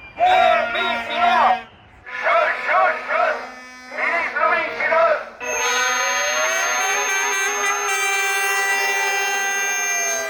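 A feedback whistle enters at 5.40 s and continues to the end of the clip. It is a thin, steady tone at 6.4 kHz. It sits roughly 10 dB below the main sound and swells and fades slowly in level. It never swells into a howl. The likely cause is a loudspeaker-to-microphone loop held just at the edge of feedback. At that point one high frequency keeps ringing without building up further.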